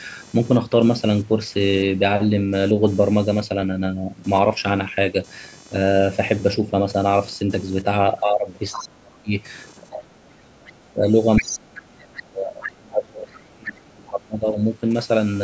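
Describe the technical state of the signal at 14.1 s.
At 14.1 s three faults overlap.

Computer activity noise runs under the whole clip: a buzzing, chirping texture pulsing at roughly 500 times per second, sitting around 30 dB below the speech. Load changes in the processor, graphics card or mouse shift the shared ground of the audio circuit, and that current ripple reaches the signal. Unlike mains hum, its rhythm follows what the computer is doing, and it pays no attention to the speech.

Speech suppressed in double talk covers 11.37 to 14.58 s, so 14.1 s falls late in that stretch. The talker's level sinks in ragged pieces, at its deepest by something like 35 dB. This is likely an echo canceller that met both sides talking at once, could not separate the local voice from the loudspeaker echo, and pulled everything down. A network dropout would cut to silence or glitch.

The other side's voice leaking through appears right at this moment, from 14.06 to 14.1 s. 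It is a brief, faint scrap of a second voice roughly 30 dB under the speech. It is likely loudspeaker sound that the echo canceller failed to remove from the microphone. Room reverberation would smear the talker's own voice, but this is a different voice intruding for a few hundredths of a second.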